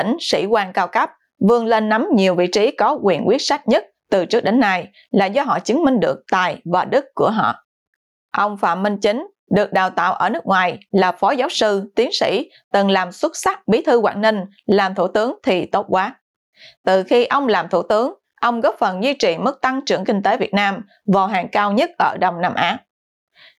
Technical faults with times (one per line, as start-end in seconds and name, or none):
0.00-23.58 gain pumping